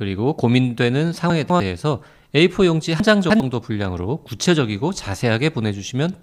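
At 1.3 to 1.6 s, and again at 3.0 to 3.4 s, the speech jumbles: chunks out of order. A 100 ms chunk plays two, then three chunks late. Unlike a dropout, nothing goes missing. The same sound returns misplaced, with three hard joins.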